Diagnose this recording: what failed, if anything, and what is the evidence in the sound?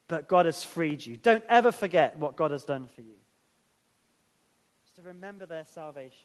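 Nothing failed; the room noise, the level shift around two and a half seconds as the talker moves, and the top end stopping near 12 kHz, which fits an Opus call path at around 20 kbps, are all expected here.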